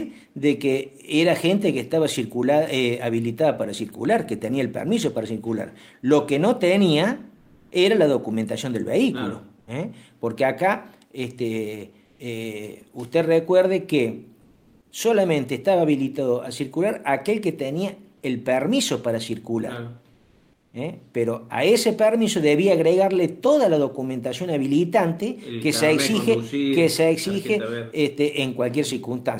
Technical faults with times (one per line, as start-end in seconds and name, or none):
7.37-7.71 comfort noise in place of the background
12.05-12.19 comfort noise in place of the background
14.41-14.91 comfort noise in place of the background
20.13-20.73 comfort noise in place of the background